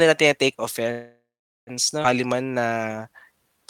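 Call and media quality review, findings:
Call audio freeze, 0.91 to 1.70 s: last sound carried on as a fading buzz or hiss, then about 420 ms of silence, for 756 ms of fill in all. Likely cause is late packets emptying the jitter buffer. Nothing is lost, and the speech resumes where it stopped. Unlike a skip, this adds 756 ms of delay.

Skip ahead, 2.03 to 2.07 s: speech jumps forward across a joining gap of only about 11 ms, with roughly 0.4 s of audio gone. The probable component is the jitter buffer dropping a late or overflowed stretch while later packets waited. Unlike a freeze, there is no filler sound or pause, and delay shrinks by about 0.4 s.

Jitter buffer slow-down, 2.27 to 3.64 s: speech runs at 88% speed with drawn-out sounds and unchanged pitch. The jitter buffer repeats single pitch periods and bits of pauses to rebuild its reserve, adding 177 ms over the stretch. Unlike a tape-style slowdown, pitch does not drop, and unlike a freeze, the stretching is spread out rather than one held gap.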